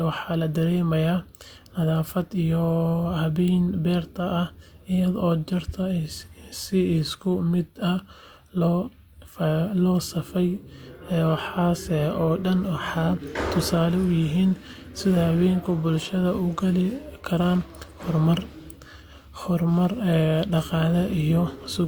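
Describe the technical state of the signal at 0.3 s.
At 0.3 s the speech signal is intact, with no dropout, clipping, distortion or other technical fault audible at that point.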